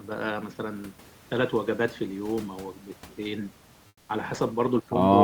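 From 3.87 s to 4.09 s, the room noise behind the speech gives way to comfort noise in place of the background. For those 220 ms the real background detail vanishes. A smooth, featureless hiss fills the gap instead, about 5 dB quieter than the room sound around it. The likely cause is discontinuous transmission, such as Opus DTX. The sender stopped sending during the pause. The receiver then filled the silence with synthetic noise of a roughly similar shape.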